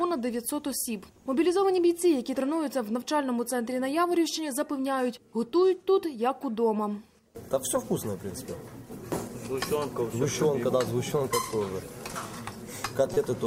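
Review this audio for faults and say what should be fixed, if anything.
A brief glitch cuts through the sound from 13.14 to 13.17 s, caused by damaged data in the compressed stream that made the decoder misread frames and resynchronise. Verifying file integrity with checksums and re-fetching any corrupted segment before decoding would prevent it.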